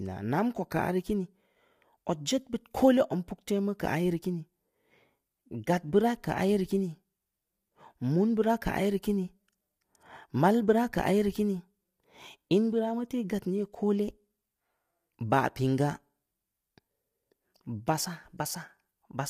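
Throughout, the speech sounds rough and grainy, with smeared pitch detail from short frames, likely low-delay AAC compression (AAC-ELD) at a bitrate around 32 kbps.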